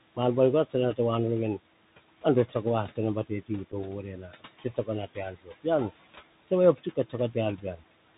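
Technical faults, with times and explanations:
throughout: noise suppressor artifacts. A suppressor is judging each frequency band frame by frame and pulling down whatever it reads as steady noise, by about 17 dB here. The room noise, sitting about 17 dB under the speech, sinks in the gaps and swells back under each phrase.
throughout: Bluetooth CVSD headset codec. The audio has passed through a narrowband headset link that codes each sample as a single up-or-down step with an adaptive step size, which fits a 64 kbps CVSD stream. Nothing above 4 kHz survives, so the sound is boxed into telephone bandwidth. Sharp, loud high-frequency moments outrun the step and distort, sibilants turn scratchy, and a grainy hiss rides under the speech for the whole clip.
3.26–3.5 s, 4.03–4.88 s, 5.07–5.66 s, 6.75–7.14 s: speech cut by the noise suppressor. In each of these stretches the suppressor mistook part of the speech for background and turned it down along with the noise. 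The drops reach about 14 dB in the first, about 18 dB in the second and third, and about 11 dB in the last. Soft consonants and word endings come out swallowed or faint, and the 4.03–4.88 s stretch is hit hardest.
3.72–3.74 s: unconcealed Bluetooth headset packet loss. About 7.5 ms of audio never arrived from the headset, which fits a couple of lost packets, and nothing was done to fill the gap. A brief hole opens in the speech with hard edges. Because the CVSD decoder has to rebuild its step size afterward, the speech comes back quieter for a moment before recovering.
6.4–6.48 s: clipped start after a pause. After a pause of about 0.34 s, the output path had gone idle and needed time to wake or relock before passing sound again. The first 77 ms of the next phrase were lost in that delay, so it bursts in abruptly out of silence with its opening sound missing.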